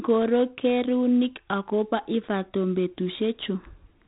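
Throughout, the speech carries heavy 4-bit ADPCM compression damage. Each sample is coded as a coarse step from a prediction, so gritty hiss tracks every loud syllable and sharp onsets distort. Nothing remains above 3.8 kHz, which fits a 32 kbps stream, dulling the sound.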